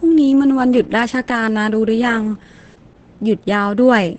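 Opus voice compression throughout: speech sounds muffled, hoarse and slightly robotic, fitting a 10 kbps SILK stream, with the spectrogram empty above 8.9 kHz.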